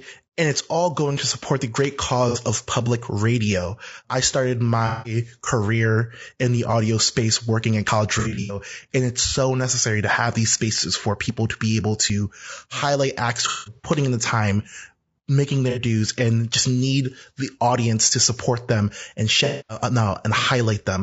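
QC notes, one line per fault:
Throughout: low-delay AAC compression, plainly audible, likely AAC-ELD at a bitrate around 32 kbps. The short frames don't resolve the pitch harmonics well, so the speech comes out rough and grainy, with noise between harmonics and a thin, synthetic-sounding top band.
1.17, 7.88 and 12.10 s: dropped buffer (overrun), probably the capture side not reading samples in time so they were overwritten. Each has the speech jumping ahead, skipping roughly 10, 40 and 20 ms respectively, with no gap of silence.
2.29–2.38, 4.87–5.16, 8.19–8.58, 13.48–13.90, 15.70–15.79 and 19.45–19.81 s: AAC frame loss with concealment. The decoder patches the missing frames from the last good spectrum, so you hear smeared, noisy, phasey stretches. The first falls between "to support the great" and "of public radio I", and the one at 15.7 s sits just before "dues and just". Both last 60 ms. 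The 4.87 and 19.45 s losses run 180 and 240 ms. The 8.19 s patch, just before "and it's so necessary", is scattered over 300 ms with a longest run of about 100 ms. The 13.48 s one spreads over 360 ms with a longest run of about 200 ms.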